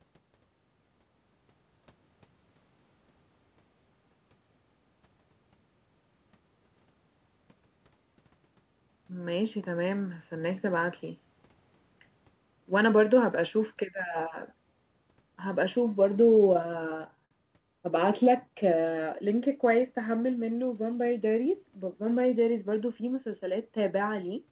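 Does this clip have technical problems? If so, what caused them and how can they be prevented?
Yes. From 16.26 to 17.33 s the speech stutters and drags through a dozen brief hitches, the longest about 54 ms, as each sound is held and stretched. These are repeated stalls (stutter): packets arrived late, the jitter buffer kept running dry, and the receiver continued the last sound to fill about 165 ms, with nothing actually lost. A steadier network path or a larger jitter buffer target prevents this.

Between 18.49 and 18.82 s the speech slows to 88% of its pace at unchanged pitch, sounding drawn out. This is a jitter buffer slow-down: with the buffer low, the receiver repeated single pitch periods to add 50 ms of reserve. Reducing network jitter keeps the buffer from needing to refill.

From 20.84 to 21.64 s the speech runs about 8% fast at the same pitch and sounds hurried. This is a jitter buffer speed-up: a backlog of delayed packets arrived together, and the receiver cut short pitch-period pieces, roughly 70 ms in total, to bring the delay down. 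Smoother packet delivery avoids these bursts.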